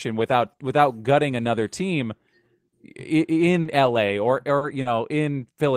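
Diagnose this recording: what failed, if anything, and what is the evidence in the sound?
Brief smears at 3.61–3.68 s, 4.57–4.64 s and 4.81–4.88 s are short concealed packet loss: 40 ms network gaps filled by extending the preceding speech.

Rougher, noisier 20 ms patches at 3.65 s, 4.61 s and 4.85 s are lost packets rebuilt from error correction, decoded from low-bitrate Opus in-band copies.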